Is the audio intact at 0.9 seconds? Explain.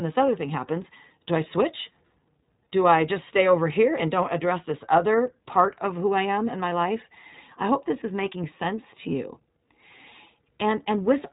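No. At 0.9 seconds, as everywhere in this speech clip, the sound carries iLBC codec damage. The codec codes each short frame's excitation independently, and the slightly rough, synthetic texture fits 20 ms frames at about 15.2 kbps. The band is narrowband, with nothing above 3.8 kHz, so sibilants sound dull. On a spectrogram, energy stops at a flat ceiling near 3.8 kHz with empty space above it. The waveform shows no gaps or clipping.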